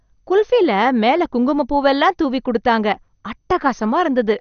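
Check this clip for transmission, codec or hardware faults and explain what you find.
One fault runs through the whole speech clip, and it is most likely MP2 compression. Too few bits shut off the MPEG Layer II sub-bands above about 6.5 kHz, a cut that fits roughly 48 kbps. The speech sounds dull, with plainly audible gurgling, granular distortion where the surviving bands are coarsely quantised.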